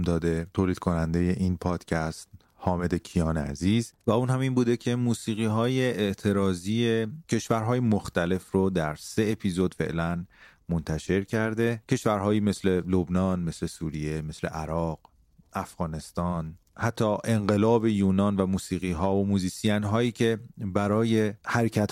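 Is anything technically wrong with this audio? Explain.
No, nothing technically wrong turns up anywhere in this speech recording, so there's nothing here to flag.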